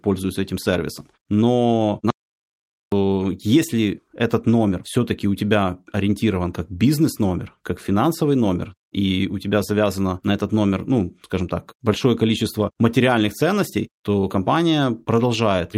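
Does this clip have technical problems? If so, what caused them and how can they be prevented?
Yes. An audio dropout to silence runs from 2.10 to 2.92 s. About 0.82 s of speech is lost, and the sound returns abruptly at "если этот номер". The gap is silent with no room tone, which sets it apart from a natural pause. The likely cause is a brief loss of the input signal, such as a loose connection or a stray mute. Secure connections and monitor the input live while recording to prevent it.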